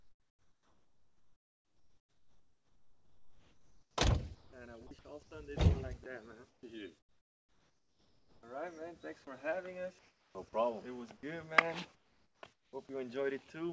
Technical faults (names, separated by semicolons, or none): sound chopped by the voice detector; comfort noise in place of the background; sound dropped by the voice detector